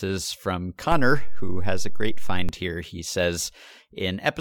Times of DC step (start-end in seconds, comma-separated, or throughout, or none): 0.92-2.49